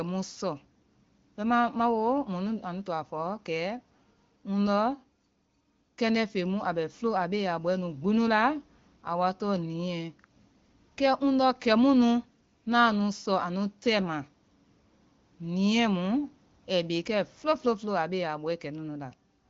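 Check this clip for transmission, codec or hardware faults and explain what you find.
Nothing stood out on listening to this speech, which carries the band-limited character of wideband AMR coding with nothing heard above 7 kHz, as expected at 18.25 kbit/s.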